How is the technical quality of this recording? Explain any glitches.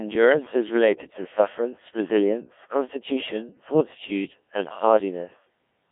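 Technical quality is poor: the speech has passed through the Codec 2 vocoder for the whole clip, with heavy damage. Codec 2 discards the waveform and sends only pitch, voicing, energy and a spectral envelope. The decoder then rebuilds the speech from sine waves, which is why it sounds robotic and buzzy. The thinness fits a rate of about 1.3 kbit/s, within a band of roughly 150 Hz to 3.5 kHz. A low-bitrate waveform codec would instead sound swirly or warbly while keeping the original's natural texture. Here that texture is replaced by synthetic buzz.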